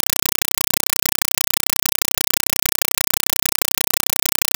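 Throughout, a compressed stream played as audio: undecoded AC-3 data, likely, replaces the speech, with 5.33 ms noise bursts repeating 31.25 times a second as loud, chattering static.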